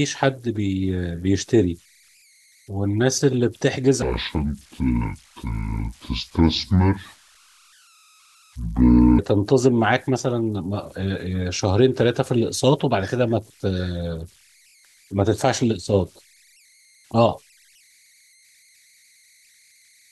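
Throughout the speech, converter idle tones sit about 36 dB below the signal: a tone around 2 kHz in the pauses, with grainy noise under quiet passages. An undithered delta-sigma converter settles into repeating bit patterns, and unlike steady hum, the tone's pitch wanders with the input's offset.

From 4.02 to 9.19 s, a section at the wrong speed plays at 0.604 times normal, so the speech turns deep and slow, dropping by about ten semitones. Because pitch and tempo fall together, this is not pitch-shifting. It is likely a resampling or clock mismatch in editing or playback.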